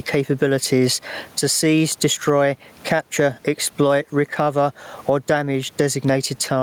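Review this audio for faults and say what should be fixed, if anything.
Gain pumping runs throughout the clip: the gain ducks by roughly 15 dB under loud sounds, squashing loud and soft parts together. The likely cause is input gain set far too high, with a fast limiter clamping every peak. Lowering the microphone gain so the limiter rarely engages would prevent it.

Clock drift between sender and receiver is also present throughout: the sender's clock runs roughly 1.5 percent slower than the receiver's, so the jitter buffer keeps draining and the receiver must stretch the incoming audio to avoid running empty. Locking both ends to a common clock, or using adaptive resampling, would prevent this.

Repeated timing corrections from 0.32 to 6.12 s are that drift being absorbed. The receiver repeats short pieces, all in the same direction and unevenly spaced, adding around a tenth of a second overall. 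This gives a 98 percent playback rate. Smooth resampling instead of piecewise repeats would prevent the edits.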